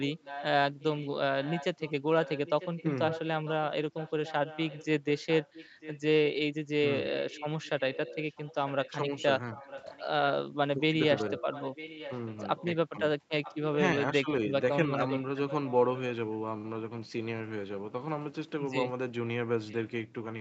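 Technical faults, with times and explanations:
0.00–6.00 s, 7.04–10.05 s, 11.15–12.65 s, 13.42–13.59 s, 14.30–15.99 s and 19.69–19.75 s: echo leak. A second, delayed copy of the speech runs under the talker, 948 ms behind the original. In most stretches it sits about 15 dB below the speech. At 14.30 s it is about 20 dB down, and in the brief scrap at 19.69 s about 30 dB down. The likely cause is a loudspeaker at one end whose echo canceller let part of the played-back voice reach its microphone and sent it back.
9.05–9.11 s: speech suppressed in double talk. The voice dips by up to about 5 dB, for about 70 ms in total. This happens inside a stretch where the leaked echo is also present, so two sounds overlap. The likely cause is an echo canceller that could not tell its own talker apart from the loudspeaker echo. Unable to separate them, it turned both down together, and the talker's level drops for that moment.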